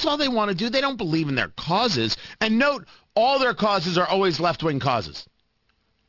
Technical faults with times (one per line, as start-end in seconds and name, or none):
0.00-6.09 aliasing